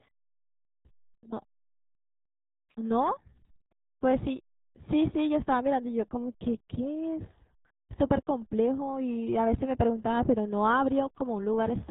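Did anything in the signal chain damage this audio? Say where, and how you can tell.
Yes. The speech is muffled and gargly throughout, with nothing above 3.8 kHz: heavy codec-stage damage from RealAudio 14.4, consistent with an 8 kbit/s stream.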